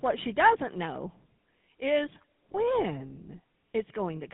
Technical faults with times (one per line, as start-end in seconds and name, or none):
0.00-4.33 GSM full-rate codec
2.52-2.55 lost GSM frames